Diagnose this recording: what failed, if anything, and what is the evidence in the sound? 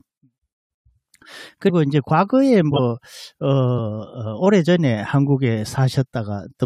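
Codec-side failure: compressed frames skipped at 2.71–2.79 s and 3.77–3.80 s. Each jumps about 100 ms of speech ahead.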